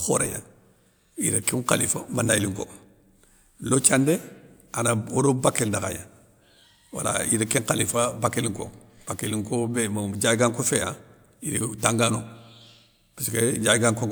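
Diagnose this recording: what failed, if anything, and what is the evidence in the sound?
Nothing in the recording points to a failure at any stage, from wiring and conversion through buffering, processing, transmission, storage or playback, so the speech signal arrives intact and continuous.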